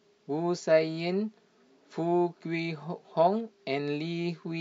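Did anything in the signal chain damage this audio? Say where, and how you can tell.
No, nothing in this speech stood out on listening as a sign of damage at any stage of the chain.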